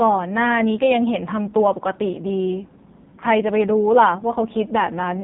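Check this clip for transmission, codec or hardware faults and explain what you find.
The clip has one codec fault, present from start to finish: AMR narrowband mobile codec coding throughout, with heavy damage. Everything above about 3.8 kHz is gone, leaving a flat empty band on a spectrogram. The speech is rebuilt from a vocal-tract model fed by sparse pulses, so it sounds buzzy and synthetic, which points to a low rate near 5.9 kbps.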